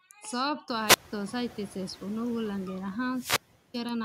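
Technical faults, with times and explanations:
Throughout: noise suppressor artifacts. The suppressor pulls down each frequency band it judges to be steady background, cutting the noise by about 8 dB, so the room noise dips in the gaps between words and swells back up beneath them. This pumping, which follows the speech, distinguishes it from the room noise itself, which jumps up by about 24 dB near half a second and then sits steadily about 18 dB below the speech.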